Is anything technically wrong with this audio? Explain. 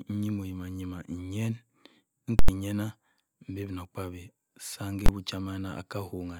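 Yes, the speech carries two bursts of invalid numbers at full scale. A calculation produced invalid or infinite values that were clamped to the extreme level, so the output sits flat at one extreme value, far beyond the speech's peaks, for a whole block. From 2.39 to 2.49 s, a block of about 93 ms (consistent with a 4096-sample block) gives a loud pop at each edge with silence between. From 5.06 to 5.09 s, a 23 ms block is heard as one bang.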